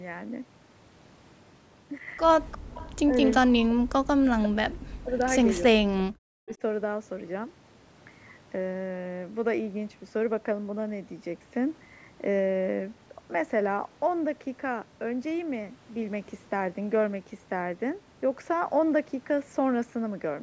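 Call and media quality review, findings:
Echo leak, 2.51–2.92 s and again 3.30–3.36 s: faint delayed copy of the far-end speech trailing it by 349 ms, around 20 dB and 25 dB below the speech. Likely residual echo passing the loudspeaker-side echo canceller. Unlike a room reflection, the lag is far too long and constant.

Background gated by the echo canceller, 2.58–2.75 s: room tone drops out hard, down about 40 dB for roughly 150 ms in total, then snaps back. Canceller's suppressor clamping the microphone during loudspeaker playback.

Speech suppressed in double talk, 3.04–5.15 s and 5.69–6.62 s: near-end speech dips, thins or breaks up in pieces, drops near 40 dB, about 1.5 s and 0.7 s affected. Likely the canceller failing to separate the talker from the echo during overlap, unlike gating, which hits only room noise.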